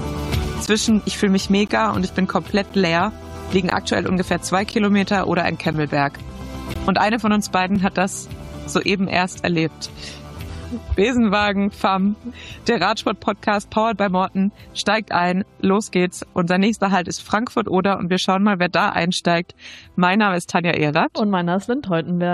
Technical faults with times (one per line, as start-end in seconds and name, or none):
0.66 gap between stream segments
1.68 gap between stream segments
2.69 gap between stream segments
3.70 gap between stream segments
4.71 gap between stream segments
5.73 gap between stream segments
6.74 gap between stream segments
7.75 gap between stream segments